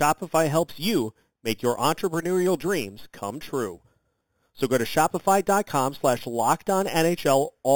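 Throughout the speech there is imaging from sample-and-hold upsampling. Each sample was repeated without a smoothing filter, which fits a rise from 8 kHz to 44.1 kHz, so mirrored copies of the speech spectrum sit above the real band. The first spans 4 to 8 kHz at about 15 dB below the signal, giving a metallic fizz. Unlike hiss, it vanishes in pauses. Unlike aliasing, it lies above the band, and its lowest copy moves opposite to pitch.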